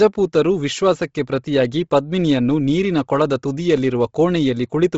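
From start to finish the speech cuts off hard at 7.7 kHz, and its upper band sounds breathy and grainy. This is likely heavy Bluetooth LC3 compression, replacing discarded high detail with noise. A spectrogram shows a flat ceiling at 7.7 kHz with speckled, blotchy texture beneath it.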